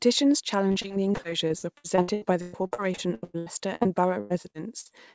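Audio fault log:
0.68–4.91 s repeated packet loss (robotic sound): about thirty rapid dropouts, longest 111 ms, each filled by extending the previous sound, so speech turns choppy with pieces missing.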